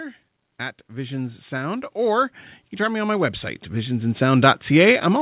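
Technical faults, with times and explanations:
0.88 to 5.21 s, automatic gain rising: the gain control judged the input too quiet and kept raising its gain, so voice and background noise swell together steadily to the end, all within a call band that stops at 4 kHz.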